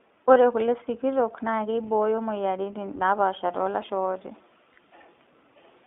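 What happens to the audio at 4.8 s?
Just before that point, at 4.74 s, there is a brief dropout from lost iLBC frames. A 20 ms gap, which fits a single lost frame, is concealed by the decoder repeating the last pitch cycle blended with noise. It sounds like a short, faintly buzzy held vowel, and clean decoding resumes immediately because each frame is coded independently.

Underneath, the iLBC codec is audible throughout. It codes in 20 ms frames, consistent with the 15.2 kbps mode, and as a narrowband codec it limits the band to roughly 250 Hz to 3.6 kHz. The speech sounds narrowband, slightly rough and synthetic, with plainly audible coding damage.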